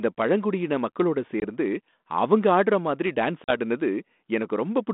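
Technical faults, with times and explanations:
1.40 to 1.46 s and 3.44 to 3.52 s, packet loss on an ADPCM call: about one packet (20 ms of audio) and then roughly two (40 ms) went missing and were filled with silence, leaving hard-edged holes. The decoder's adaptive predictor and step size then no longer matched the sender's, so the speech resumes with slight distortion until it resynchronises over some tens of milliseconds, on a narrowband line consistent with 32 kbit/s G.726.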